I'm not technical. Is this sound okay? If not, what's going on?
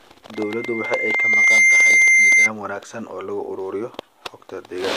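No. There is loudspeaker feedback squeal from 0.35 to 2.50 s. A microphone is picking up the loudspeaker it feeds, so the sound goes round in a loop. One pitch, about 2.1 kHz, keeps getting louder each time around. You hear a thin whistle that swells over about a second into a piercing squeal, much louder than the speech. It stops at 2.50 s.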